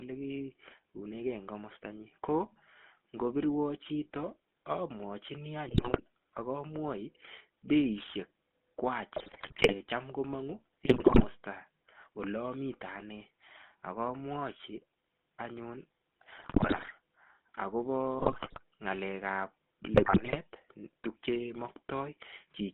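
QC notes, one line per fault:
Throughout: GSM full-rate codec. The speech has a buzzy, gravelly roughness that comes from the codec modelling the vocal tract and driving it with a sparse, regular pulse train instead of the real excitation. The band is held to roughly 200 Hz to 3.6 kHz, so there is no air or sibilant detail. The damage is steady and even across the whole 13 kbps stream, unlike the brief, erratic breakups of transmission errors.
5.68–6.00 s, 9.12–9.73 s, 10.84–11.25 s, 16.38–16.91 s, 18.18–18.62 s, 19.94–20.39 s: GSM bit errors. In each of these bursts the speech breaks into squawks, pops and gargling, because corrupted filter, pitch and gain values reach the decoder. That bends the spectrum or throws the level up for individual 20 ms frames. Each burst lasts between about 0.3 and 0.6 s, with around 3 to 7 percent of bits wrong. The bursts are sudden and frame-by-frame, which separates them from the constant codec roughness underneath.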